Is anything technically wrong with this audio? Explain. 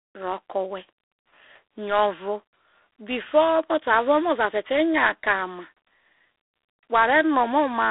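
Yes. Throughout, the speech carries G.726 ADPCM damage: each sample is coded as a few bits of difference from an adaptive prediction, and the harsh, rasping hiss that rises and falls with the speech level points to 24 kbit/s. A spectrogram shows a hard ceiling near 3.8 kHz, little below 300 Hz, and a grainy noise floor that swells with each syllable.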